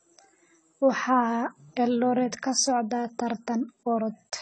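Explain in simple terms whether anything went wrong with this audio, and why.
The speech sounds dull and clearly swirly all the way through, with nothing above 10 kHz. That is likely AAC compression squeezed too hard, discarding detail to save space.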